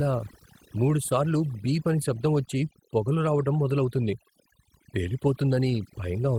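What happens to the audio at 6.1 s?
At 6.1 s the overdone noise removal that runs throughout is still audible: aggressive spectral subtraction gates out bands near the noise estimate, leaving twinkling specks.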